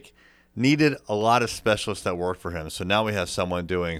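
Three single sharp clicks cut through the speech: at 1.21 s, just after "needed a" and before "of specialists that worked"; at 2.15 s, between "of specialists that" and "worked for him"; and at 3.09 s. Each is far too brief to remove any sound. These are likely dropped samples, where a tiny fraction of a millisecond vanished from the stream and the waveform jumped abruptly to a later value.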